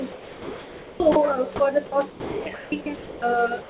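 Seven times, the speech gives way to a steady hiss and then cuts back in: 0.12–1.0 s, 1.12–1.16, 1.86–1.92, 2.1–2.46, 2.54–2.72, 2.96–3.22, and from 3.62 s to the end. That's likely sound dropped by the voice detector, with comfort noise filling the gaps over a band that stops at 4 kHz, as G.711 does.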